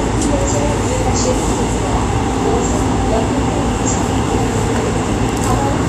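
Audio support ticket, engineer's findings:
Hissy, grainy treble throughout, with roughened tones and softened attacks; nothing above 14.2 kHz. Likely Vorbis compression: the coarsely quantised residue turns fine high-frequency detail into noise-like grain of similar energy, and the lowered cut-off removes the top band. Damage plainly audible, consistent with a low bitrate near 36 kbps.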